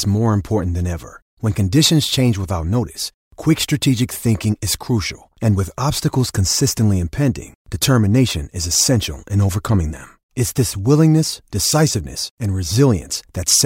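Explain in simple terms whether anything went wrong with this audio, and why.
Clock slip clicks run from about 0.11 s to 13.62 s: a soft, steady rattle of tiny ticks, roughly twenty each second, riding on the speech. Likely two devices kept slightly different time, so single samples kept slipping.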